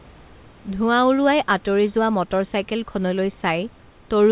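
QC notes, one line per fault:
No faults heard anywhere in this speech recording.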